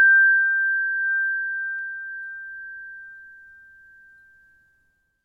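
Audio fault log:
1.79 s, dropped samples: one sharp click in the sound, likely from roughly a single missing sample making the waveform jump abruptly to a later value.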